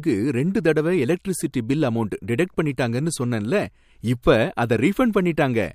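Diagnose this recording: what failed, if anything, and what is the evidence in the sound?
Nothing failed: the speech carries no audible defect traceable to any stage of the chain.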